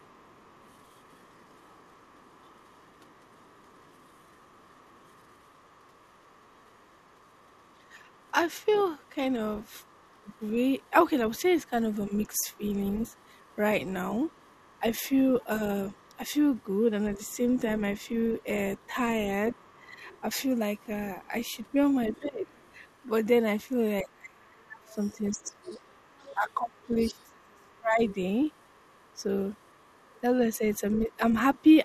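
From the start to 31.63 s, the echo canceller has likely failed to remove all of the loudspeaker signal picked up by the microphone, so the other side's voice is leaking through beneath the talker for the entire clip. The leak sits far below the main speech, roughly 30 dB down, and comes across as a faint second voice rather than a clear competing one.

At six points, both sides are likely talking at once, and the canceller, unable to separate its own talker from the echo, turns everything down: speech suppressed in double talk. The dips fall at 10.23 s, 12.09 to 12.61 s, 14.8 to 17.19 s, 18.94 to 20.22 s, 22.19 to 22.5 s, and 24.02 to 31.65 s. The first two are brief, drops of about 15 and 10 dB, a quick ducking or dulling. The last stretch is the worst, with the talker's voice dropping by around 30 dB in pieces totalling about three seconds.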